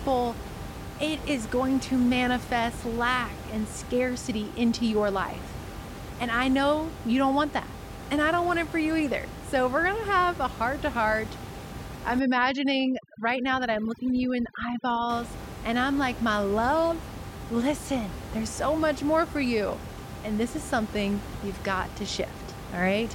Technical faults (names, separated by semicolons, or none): overdone noise removal